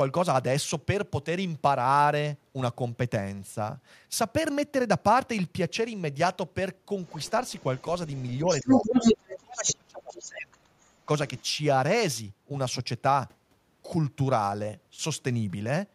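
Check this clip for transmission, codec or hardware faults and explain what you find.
Two related echo-control faults appear in this speech between about 7 and 11.4 s.

Other side's voice leaking through is heard five times: 7.06–7.82 s, 8.15–9.76 s, 10.16–10.22 s, 10.55–10.89 s and 11.38–11.43 s. The likely cause is loudspeaker playback of the far end reaching the microphone and not being fully cancelled. Most of these are faint scraps, roughly 20 to 40 dB under the talker. Between 8.15 and 9.76 s, though, the leaked voice is about 5 dB louder than the talker and plainly audible as a second voice.

Speech suppressed in double talk occurs at 8.44–8.96 s and 9.42–11.09 s, overlapping the strongest leakage. The echo canceller likely could not distinguish the near talker from the loudspeaker echo while both were active, so it attenuated everything. In the first span, the talker's level dips by around 15 dB for a brief stretch of about 150 ms. 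In the second, the drops reach around 30 dB and affect roughly one and a half seconds, so the voice sounds gated and partly missing.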